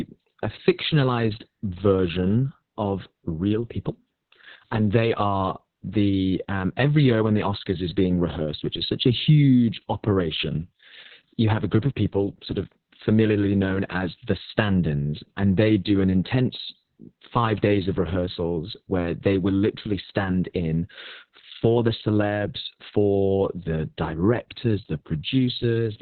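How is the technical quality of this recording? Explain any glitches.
Quality is poor throughout. The speech sounds muffled, hoarse and slightly robotic, with nothing above 4.2 kHz. This is heavy Opus voice compression: narrowband SILK coding the excitation coarsely, consistent with a bitrate near 6 kbps.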